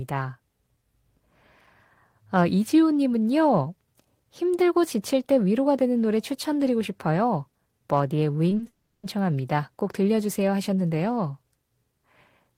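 Short concealed packet loss hits this speech recording three times in quick succession, at 8.49 s, 8.57 s and 8.63 s, each a gap of about 20 ms. Every time, the decoder had nothing to play and patched the hole by extending the preceding sound for those 20 ms before rejoining the real signal, so each spot comes across as a tiny smear or wobble, and a brief consonant falling there can disappear. A long network dropout follows immediately, from 8.67 s to 9.05 s. The sound stretches into a buzzy or hissy continuation of the last sound that lasts roughly 360 ms and fades, then drops to silence for about 10 ms before the speech resumes further along, with that stretch gone for good. The likely cause is a burst of lost packets, which the three earlier short gaps suggest was building up.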